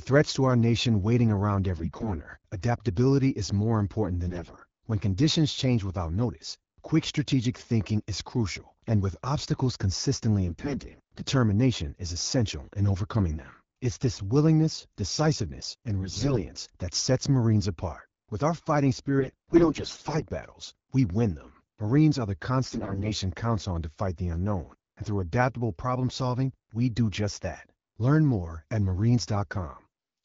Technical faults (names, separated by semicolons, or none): AMR bit errors